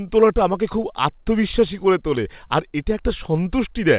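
A speech clip, carried over a call path using G.711 A-law, with nothing above 4 kHz. Clock drift between sender and receiver runs throughout. The sender's clock runs about 3% slow, so the receiver's buffer keeps draining. Repeated timing corrections follow from 0.07 to 3.45 s. The receiver stretches the sound with short repeated pieces, adding roughly a tenth of a second. The result is slightly slowed, uneven pacing with faint hiccups.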